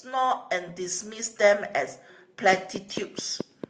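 A speech recording opens with automatic gain rising: from 0.05 to 1.68 s the level climbs by about 6 dB as the gain control lifts a quiet input. Unlike a talker simply getting louder, the background noise swells in step with the voice. From 2.53 s to the end, a train of clicks ticks at a regular 4.5 per second, standing well above the speech. It is likely interference from nearby equipment or a faulty connection. The clicks share one shape and keep their steady pace through pauses, which distinguishes them from random crackle.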